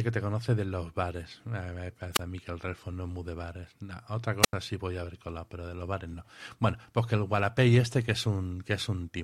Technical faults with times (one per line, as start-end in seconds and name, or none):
2.13-2.20 wireless microphone squelch dropout
4.42-4.53 wireless microphone squelch dropout